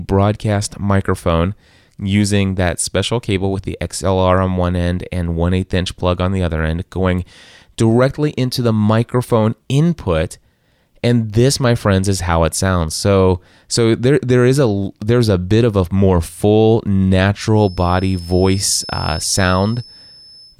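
From 17.51 s to the end of the speech, a thin, steady whistle near 5.2 kHz sits well beneath the talking, some 20 dB down, and swells and fades slowly in level without growing. This is a feedback whistle. The likely cause is the loudspeaker-to-microphone loop hovering right at its feedback point, so a single high frequency keeps recirculating and ringing on but never gains enough to run away into a howl.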